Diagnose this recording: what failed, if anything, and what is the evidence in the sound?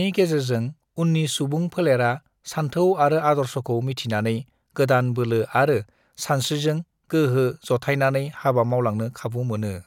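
No fault is audible here.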